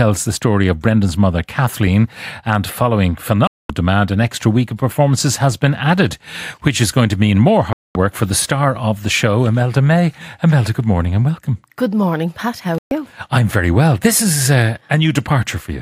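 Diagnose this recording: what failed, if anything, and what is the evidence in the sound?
Digital broadcast dropout on the receive side: the sound mutes at 3.47–3.70 s after "and following", at 7.73–7.96 s after "going to mean more", and at 12.78–12.92 s before "I'm very well". The receiver lost valid frames and muted. The gaps of 224 and 128 ms fit whole frames of about 32 ms, and that audio is gone.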